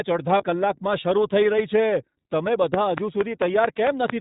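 From start to finish the speech sounds band-limited, slightly rough and synthetic, with plainly audible coding damage and nothing above 4 kHz. That is the iLBC codec at work: a narrowband VoIP coder that codes each frame's excitation independently, here at a rate pointing to 15.2 kbps with 20 ms frames.

Between about 0.38 and 0.44 s the sound briefly turns into a held, faintly buzzy vowel. These are lost iLBC frames, which fits a single 20 ms frame going missing. The decoder repeated the last pitch cycle mixed with noise, and because each frame stands alone, clean decoding returns almost immediately afterwards.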